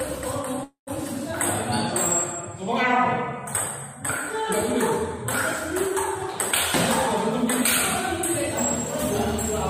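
From 0.63 to 0.90 s, a call audio freeze: the last sound trails off into fading noise, then 130 ms of silence, likely from delayed packets emptying the jitter buffer. Playback resumes intact, 235 ms late.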